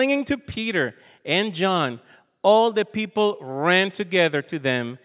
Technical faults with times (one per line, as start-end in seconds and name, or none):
none